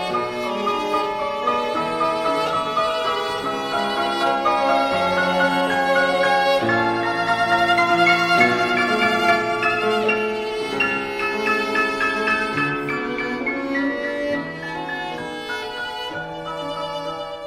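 The whole clip runs fast and sharp, about 1.38 times normal speed and roughly 5.5 semitones high, a classic wrong sample rate. Speed and pitch shift together by that ratio, which fits 32 kHz material played back at 44.1 kHz without conversion.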